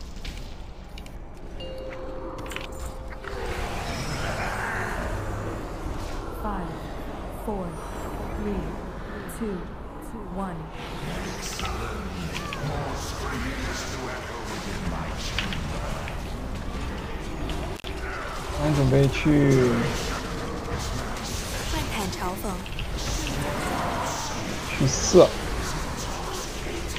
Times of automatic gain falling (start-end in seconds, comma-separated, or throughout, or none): none